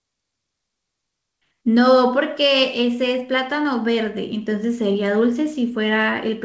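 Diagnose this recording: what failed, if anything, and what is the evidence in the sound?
Nothing has failed in this recording: the speech comes through a working WebRTC call path whose wideband coding leaves no content above 8 kHz, a normal band limit consistent with G.722 rather than a defect.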